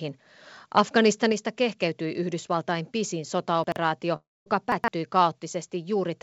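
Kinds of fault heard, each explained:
Microphone volume stepped down: At 1.32 s the speech and background drop together by about 4 dB in a single step. This is likely the call software turning down the microphone input after judging it too loud or near clipping.
Chunks out of order: Short blocks of audio play in the wrong sequence, heard as a jumbled moment. From 3.64 to 3.76 s, a 40 ms chunk arrives two chunks late. From 4.72 to 4.88 s, one lands three chunks late. No sound is lost.
Long network dropout: From 4.16 to 4.48 s about 300 ms of speech never arrives, likely from a gap in network delivery. The last sound is stretched into a fading buzz, then roughly a quarter second of silence follows. Speech resumes without the missing part.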